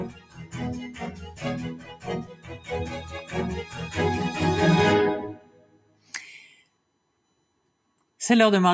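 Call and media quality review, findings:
USB whine, full length. USB bus current in 1 ms frames leaking through power or ground. Fixed whine at 1 kHz with harmonics, strongest near 9 kHz, roughly 35 dB below the signal. Steady tone sits under the entire sound.

Noise suppressor applied to music or sounds, full length. Speech-tuned suppressor left active on non-speech audio, treating sustained tones, ambience and tails as noise. Gain swings of around 15 dB. Attacks pass while held portions sink, giving audible pumping and thinning.

Sound cut by the noise suppressor, at 0.09 to 0.54 s, 1.12 to 1.43 s, 1.78 to 2.07 s, 2.24 to 2.69 s, 5.34 to 6.13 s and 6.61 to 8.19 s. Suppressor misclassifies these passages as noise. Levels dip about 7 to 12 dB, the deepest near 12 dB in the last two.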